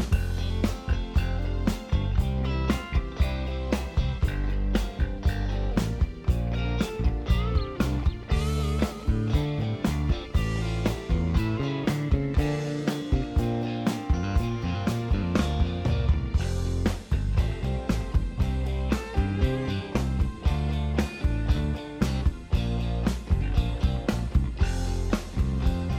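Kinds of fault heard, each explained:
Nothing here gives me anything to flag, so there's no fault to list for this one.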